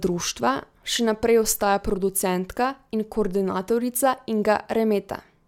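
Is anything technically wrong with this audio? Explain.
No, nothing technically wrong shows up anywhere in this speech recording.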